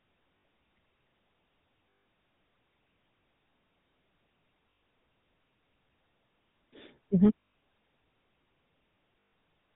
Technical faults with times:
0.00-9.76 GSM full-rate codec
0.38-0.44 lost GSM frames
1.90-2.06 lost GSM frames
4.70-4.82 lost GSM frames
7.40-7.54 lost GSM frames
9.20-9.32 lost GSM frames

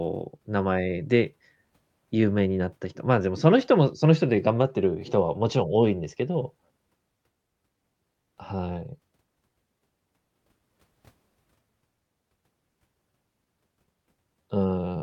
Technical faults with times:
0.00-15.03 clock drift between sender and receiver
0.38-14.90 repeated timing corrections

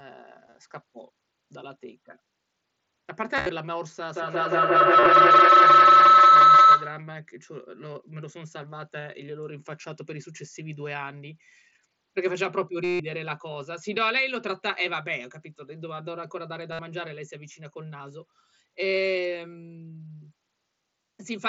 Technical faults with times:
0.47-0.55 concealed Bluetooth headset packet loss
3.36-3.49 concealed Bluetooth headset packet loss
4.13-7.18 feedback howl
5.00-5.06 concealed Bluetooth headset packet loss
12.84-13.00 concealed Bluetooth headset packet loss
16.72-16.79 concealed Bluetooth headset packet loss

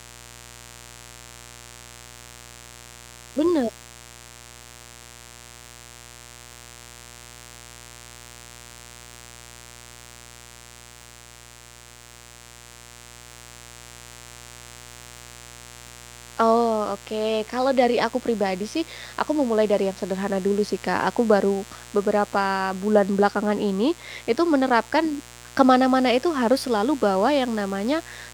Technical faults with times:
0.00-28.33 mains buzz

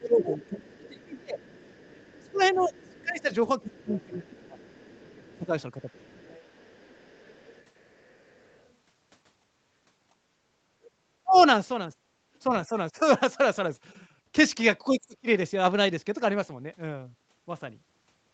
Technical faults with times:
0.00-1.41 speech suppressed in double talk
0.00-8.71 other side's voice leaking through
2.21-6.15 speech suppressed in double talk
9.42-9.52 background gated by the echo canceller
10.10-10.27 background gated by the echo canceller
10.85-11.42 other side's voice leaking through
11.23-11.37 speech suppressed in double talk
14.88-15.28 speech suppressed in double talk

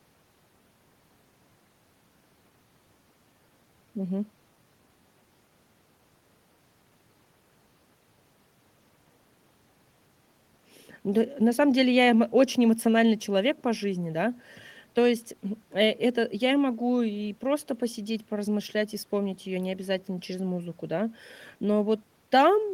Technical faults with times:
none

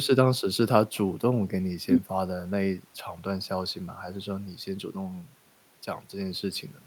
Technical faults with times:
none

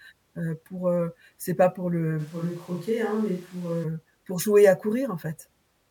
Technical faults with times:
2.21-3.83 switch to a distant microphone

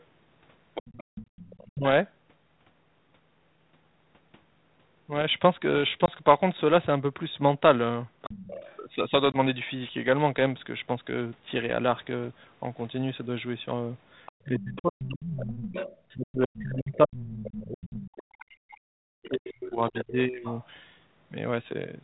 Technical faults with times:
0.00-2.09 other side's voice leaking through
1.04-1.15 background gated by the echo canceller
1.70-1.84 speech suppressed in double talk
6.06-6.10 packet loss on an ADPCM call
8.24-8.80 other side's voice leaking through
8.27-8.42 speech suppressed in double talk
9.32-9.38 packet loss on an ADPCM call
14.26-20.66 other side's voice leaking through
14.45-20.45 speech suppressed in double talk

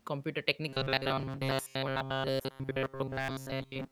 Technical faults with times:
0.68-3.91 robotic sound from repeated short buffers

